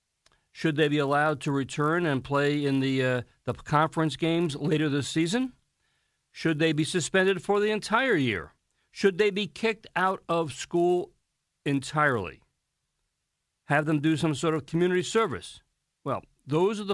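A steady 100 Hz buzz rides under this speech the whole way through, only while there's signal. It's a resampler restarted on every block: each 10 ms chunk was converted from 48 kHz to 24 kHz on its own, leaving a small error at every block edge.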